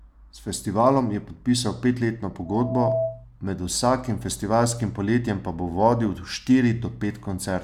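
From 2.45 to 3.25 s, loudspeaker feedback squeal: a 654 Hz tone swells over about 0.4 s, reaching roughly the level of the speech, as the microphone loop runs away.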